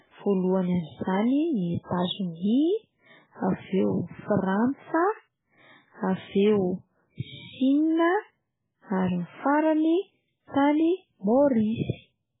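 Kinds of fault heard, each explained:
MP3 compression: The speech sounds watery and swirly throughout, with smeared onsets and nothing above 3.8 kHz. The likely cause is an MP3 encoder badly short of bits, pointing to a very low bitrate, cutting the treble and switching weak frequency lines on and off between frames.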